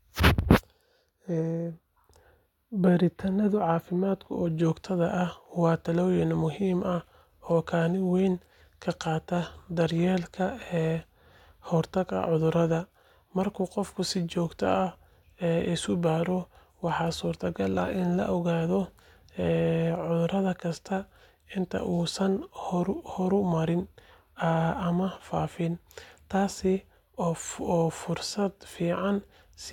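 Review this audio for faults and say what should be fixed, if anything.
Nothing here needs fixing; the speech comes through without any technical faults worth flagging.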